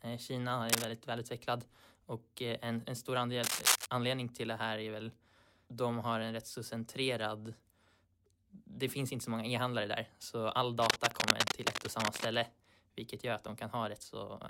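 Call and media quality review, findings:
Cable scratch noise, three events. Likely a worn cable, connector or control moved in use, its contact resistance jumping around and injecting dense, irregular noise bursts into the speech path. Heard as scratching and rustling over the speech: 0.69–0.85 s and 3.43–3.86 s, about 5 dB above the speech; 10.8–12.35 s, longest at about 1.5 s, roughly level with the speech. Check and reseat or replace the cable and connectors.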